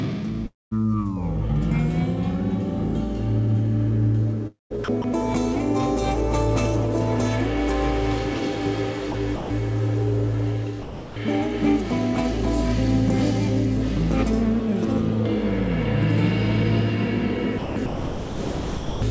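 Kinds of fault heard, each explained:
Long network dropout: Around 0.46 to 0.73 s, the sound smears into a fading buzz and then drops to near silence before resuming, with roughly a quarter second missing. The likely cause is packets that never arrived, with the receiver stretching the last sound to fill the gap.
Sound chopped by the voice detector: The audio turns choppy at 4.47 to 5.04 s, 9.12 to 9.5 s and 17.58 to 19.02 s. This is likely the sender's voice detector repeatedly toggling, swapping quiet parts for comfort noise.
Sound dropped by the voice detector: From 10.82 to 11.16 s, about 340 ms of sound gives way to steady synthetic noise, band-limited like the rest below 8 kHz, until the audio returns. This is likely the detector mistaking quiet sound for background and stopping transmission.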